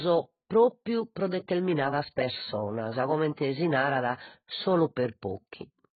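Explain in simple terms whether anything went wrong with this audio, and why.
Something did go wrong, and it lasts from the first second to the last. The speech has nothing above about 4.5 kHz, so it sounds dull and muffled, and the sustained sounds and hissy consonants carry a warbling, fizzy smear. The likely cause is heavy AAC compression. To save space, the encoder threw away the high frequencies and coarsely approximated what remained, and those approximations are what you hear.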